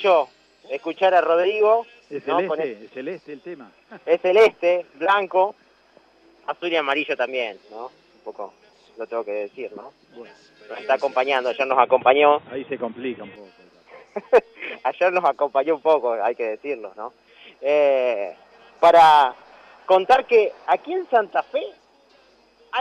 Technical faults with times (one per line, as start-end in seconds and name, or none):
11.71-13.36 input switched to a poorer device